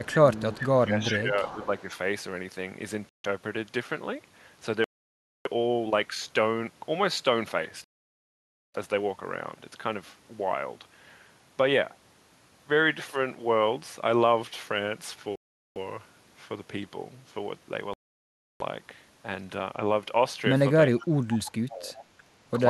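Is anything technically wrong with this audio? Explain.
Yes, the speech has three kinds of fault.

Echo leak: a loudspeaker-side echo canceller likely failed to remove everything its microphone picked up, so a copy of the speech returns 374 ms late. It appears at 0.04–0.09 s, 0.53–0.69 s, 1.04–1.83 s and 21.46–22.05 s, ranging from about 30 dB below the speech to about 10 dB below.

Speech suppressed in double talk: with both sides talking at once, the echo canceller likely could not tell its own talker from the echo and turned both down. From 0.11 to 1.71 s the speech dips by up to about 10 dB. From 20.95 to 21.97 s it dips by up to about 20 dB. Each time, roughly 0.7 s is affected.

Bluetooth stall: interference likely held up packets, so the headphone buffer ran dry and playback paused until the resent packets arrived. The sound cuts to silence and then resumes. This happens at 3.09–3.25 s (150 ms), 4.84–5.47 s (611 ms), 7.84–8.75 s (900 ms), 15.36–15.77 s (403 ms) and 17.94–18.62 s (668 ms).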